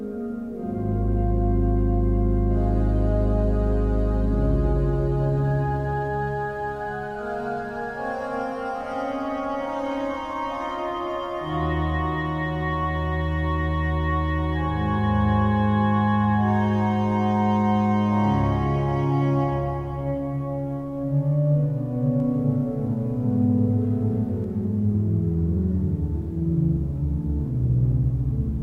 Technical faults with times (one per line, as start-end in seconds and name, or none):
22.20-24.44 doubled audio track